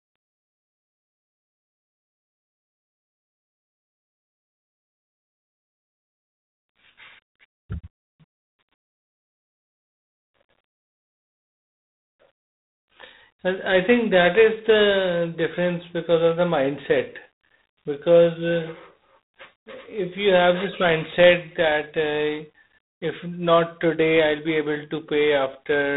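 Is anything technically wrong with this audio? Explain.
Yes. Throughout, the speech has a harsh, rasping hiss that tracks its loudness, with nothing above 3.9 kHz. This is G.726 ADPCM, which fits 24 kbit/s, where too few bits code each sample's prediction error.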